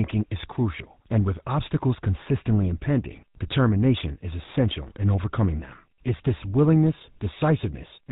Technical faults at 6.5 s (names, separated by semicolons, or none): GSM full-rate codec